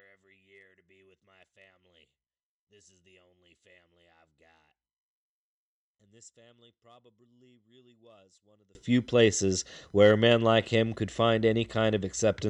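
Speech clip that from 0.0 to 8.75 s, before "few places where a", drops about 37 dB in mono, likely from one channel inverted; the waveform nearly flatlines and the spectrogram fades.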